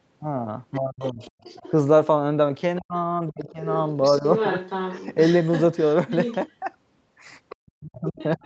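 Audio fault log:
0.74–1.71 s, 3.4–6.37 s and 7.49 s to the end: other side's voice leaking through. The echo canceller likely failed to strip the far end's loudspeaker playback from the microphone, so a second voice sits under the talker. It is faint in the first stretch at about 25 dB down, loudest from 3.4 s at only about 10 dB below the talker, and about 20 dB down in the closing second.
0.77–1.21 s, 2.8–3.6 s, 4.19–4.25 s and 7.58 s to the end: speech suppressed in double talk. With both sides talking at once, the canceller likely could not tell its own talker from the echo and turned everything down. The talker drops by roughly 30 dB in the first two spots, for a combined few hundred milliseconds each, dips more mildly, about 10 dB, for a brief 70 ms moment near 4.2 s, and sinks by around 40 dB over the final stretch.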